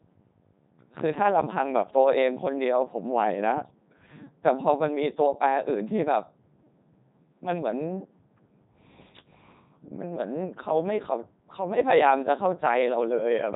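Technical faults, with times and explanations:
Throughout, Codec 2 vocoder: heavily buzzy, robotic speech with nothing above 3.9 kHz. Only pitch, voicing, energy and a spectral envelope get through, and the decoder rebuilds the sound from sine waves rather than the original waveform. This fits the 3.2 kbit/s mode.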